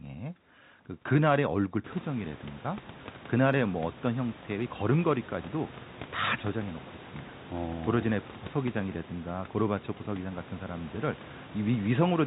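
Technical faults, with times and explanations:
Nothing here counts as a technical fault: the room noise that swells by about 20 dB at roughly 2 s is just part of the recording and stays about 21 dB below the speech, and the narrow telephone sound, with nothing above 4 kHz, is simply how G.711 telephone coding carries audio.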